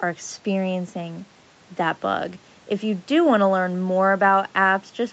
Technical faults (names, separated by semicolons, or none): none